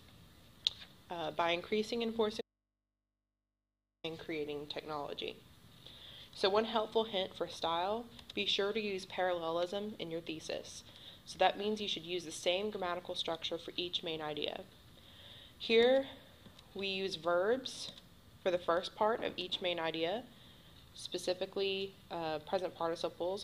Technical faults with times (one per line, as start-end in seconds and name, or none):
2.41-4.04 audio dropout to a faint residue